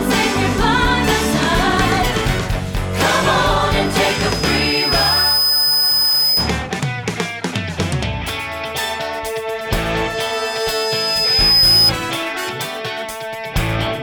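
A microphone picking up its own loudspeaker pushes the loop gain past one at 5 kHz, causing loudspeaker feedback squeal from 3.70 to 6.58 s and again from 10.14 to 11.92 s. Each time a pure tone swells over roughly a second and a half until it sits a few dB above the audio.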